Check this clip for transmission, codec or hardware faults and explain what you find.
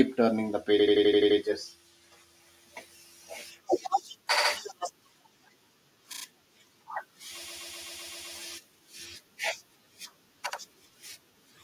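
The speech has repeated frames five times. A short run of compressed frames was delivered more than once, so the decoder replays that slice, causing a stutter and extending the audio.

From 0.78 to 1.38 s, just after "turning the", a block of about 85 ms plays seven extra times, adding about 0.6 s of stutter.

From 4.36 to 4.50 s, a block of about 63 ms repeats twice more.

From 6.12 to 6.23 s, a very short block of about 25 ms repeats three extra times.

From 7.44 to 8.34 s, the longest case, a block of about 128 ms plays seven extra times, adding roughly 0.9 s.

At 10.52 to 10.59 s, a block of about 63 ms plays once more.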